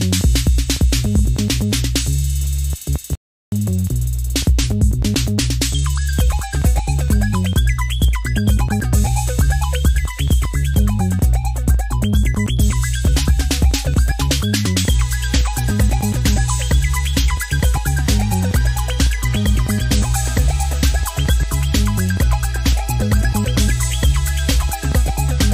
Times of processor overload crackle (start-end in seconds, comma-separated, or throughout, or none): none